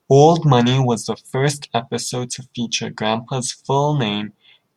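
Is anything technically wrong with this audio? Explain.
No, the speech signal shows no technical faults that a careful listener can hear.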